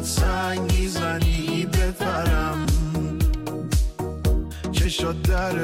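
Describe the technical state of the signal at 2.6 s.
Right around 2.65 s there's a case of compressed frames skipped. A run of compressed frames, something like seven, never got played, so the audio jumps forward by about a tenth of a second.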